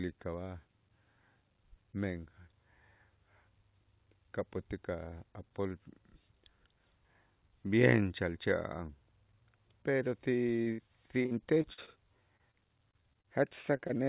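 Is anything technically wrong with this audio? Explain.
Yes, from 10.56 to 13.91 s there's repeated packet loss with that robotic sound. Packets keep dropping, and each hole gets patched by stretching the last bit of audio. There are 18 gaps, the longest 62 ms, covering about 14% of the stretch, so it comes out choppy. Throughout, the call path cuts everything above 4 kHz, which fits narrowband G.711.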